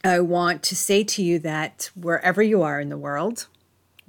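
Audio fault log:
No faults detected anywhere in the speech.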